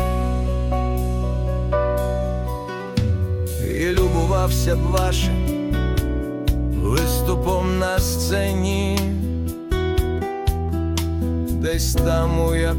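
Short blips of noise in single sub-bands break over the audio from 5.20 to 5.33 s and again, at about twice the bit error rate, from 8.29 to 8.37 s. This is DAB burbling: bit errors slipped past error correction, corrupting samples in the MP2 audio data.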